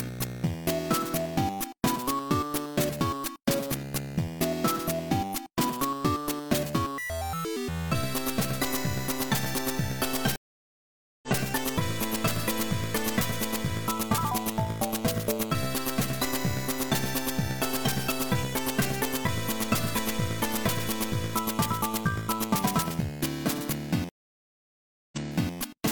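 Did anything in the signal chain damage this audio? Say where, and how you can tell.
Yes, the network stage broke twice with a stream reconnect. At 10.36 s the sound drops out for about 0.87 s and comes back at 11.29 s having skipped roughly 0.7 s of material. At 24.09 s there's a silence of about 1.03 s, and when it resumes at 25.54 s it repeats about 0.42 s of audio you've already heard. That's the player losing the connection, reconnecting, and starting a fresh decoder wherever the server picks up.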